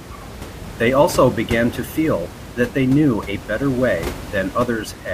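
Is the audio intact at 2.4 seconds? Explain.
Yes, the audio is intact at 2.4 seconds; the only thing audible beneath the speech is the room noise picked up by the microphone, about 14 dB below the speech, which belongs to the recording itself rather than being a fault.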